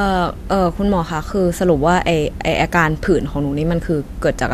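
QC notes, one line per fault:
No faults heard anywhere in this speech clip.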